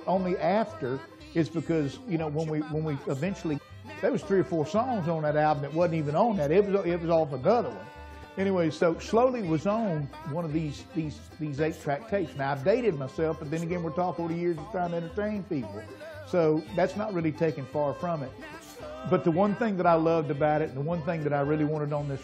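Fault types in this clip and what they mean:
Damaged data in a compressed stream: part of the compressed data was lost, zeroed, overwritten or mixed with foreign bytes, so the decoder misread or rejected those frames, lost sync and had to find the next frame header before it could continue. Each spot breaks the sound with a brief disturbance, a chirp, squawk, click or short gap, at 1.20 s, 3.57 to 3.59 s, 8.21 to 8.25 s and 14.18 s.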